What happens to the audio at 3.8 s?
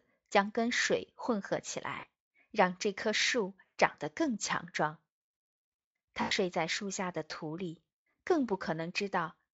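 Around 3.66 to 3.79 s the speech smears into a buzzy tone or coloured noise that fades: VoIP packet loss concealed by the speech codec, about 120 ms extrapolated from the last pitch.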